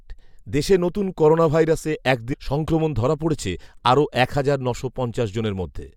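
A speech recording in which a segment of the stream likely failed to load and the player skipped on to the next one, a stream segment skipped fault. At 2.32 to 2.34 s, right after "দেশে নতুন করোনাভাইরাসে এক", the sound jumps abruptly ahead with a brief blip at the join.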